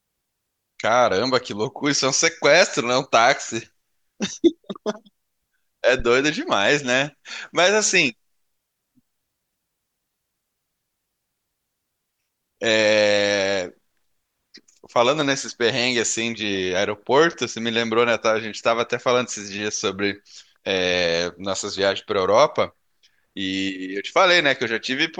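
At 6.00 to 6.08 s, a phantom power thump: a supply switching on or off on the live input sends a step through coupling capacitors, giving a deep, dry thud near about -16 dBFS that dies in 19 ms, without a plosive's breath.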